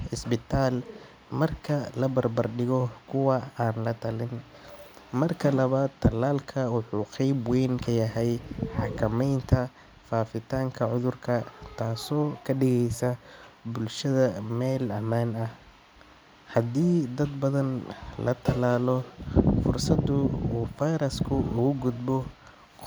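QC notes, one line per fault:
No faults found in the speech. Nothing in it needs a QC note.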